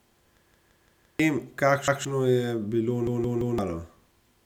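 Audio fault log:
0.51–1.20 s, 1.88–2.05 s and 3.07–3.58 s, repeated buffer: a 170 ms chunk of speech, which fits an 8192-sample buffer, plays again four, one and three extra times as fresh audio fails to arrive, dropping roughly 0.7, 0.15 and 0.5 s of the original. Each repeat is an identical copy butted against the last with a hard join, so it stutters rhythmically rather than going silent like a dropout or smearing like concealment.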